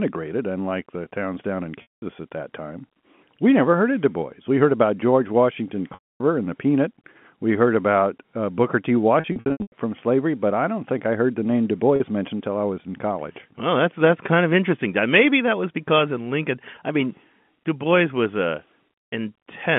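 Packets of this telephone-band speech recording were dropped, and the receiver bridged each gap with packet loss concealment by pitch repetition. It looped the last pitch period and faded it away. The losses fall at 1.82–2.02 s (200 ms, between "the towns down in" and "at that time we"), at 5.94–6.2 s (260 ms, before "and the"), at 9.2–9.72 s (scattered losses, longest run 100 ms), and at 11.96–12.00 s (40 ms, before "mentioned until I was"). The short gaps come out as a brief buzzy hold. The longer ones fade into silence before the speech cross-fades back in.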